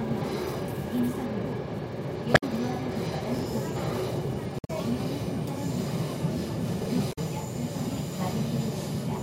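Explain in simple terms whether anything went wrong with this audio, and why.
Damaged data in a compressed stream: parts of the file were corrupted, so the decoder lost its place. You hear short chirps or blips at 2.31–2.44 s, 4.56–4.70 s and 7.09–7.19 s.

Chunks out of order: small 40 ms pieces of audio arrived late and played after the pieces meant to follow them. Nothing is lost, but you hear a jumbled moment at 3.35–3.43 s and 6.74–6.86 s.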